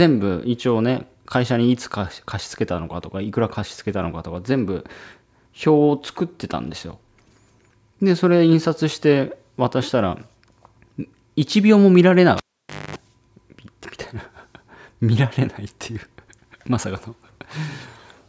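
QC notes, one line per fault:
12.37–12.96 s, cable pulled and plugged in: a live cable comes out of its socket and goes back in. The break gives a sharp pop, then the signal falls to near silence for about 0.54 s. As the plug is reinserted, only its tip makes contact at first, so for about 0.24 s a raw 50 Hz mains buzz leaks through. A second pop follows when the connection seats fully and the sound, still topping out at 8 kHz from the call microphone processing, returns.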